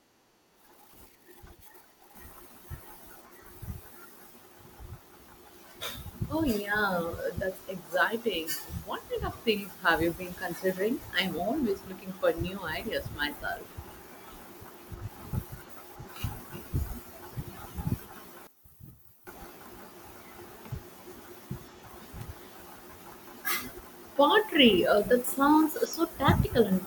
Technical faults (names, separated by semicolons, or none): one channel inverted